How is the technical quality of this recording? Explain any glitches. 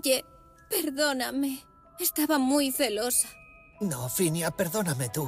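No glitches or technical faults can be heard here.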